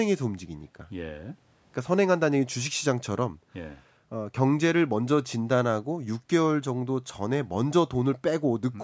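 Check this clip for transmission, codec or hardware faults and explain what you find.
Nothing to flag: the speech has passed through call microphone processing, with its usual trimming of the lowest bass and no content above 8 kHz, and no transmission, codec or hardware fault is audible anywhere in the clip.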